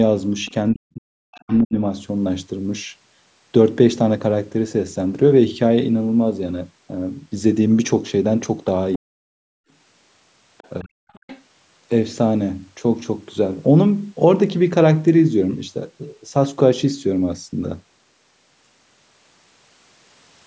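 From 0.46 to 0.54 s a faint second voice is heard, well below the speech. This is the other side's voice leaking through, likely loudspeaker echo that the canceller left in. From 0.72 to 1.76 s the speech sinks by roughly 40 dB. This is speech suppressed in double talk, likely the canceller turning everything down while both sides talked. More leakage sits inside that dip, from 1.32 to 1.59 s. At 8.93 to 8.98 s a brief scrap of leaked voice appears. Overlapping its end, from 8.96 to 9.21 s, the speech again drops in double talk. From 9.49 to 9.68 s the room sound itself falls away by about 39 dB and then returns. This is background gated by the echo canceller, clamping the microphone while the loudspeaker played. From 10.58 to 11.42 s the leaked voice comes through longer. Within it, from 10.81 to 11.12 s, the speech is pushed down once more.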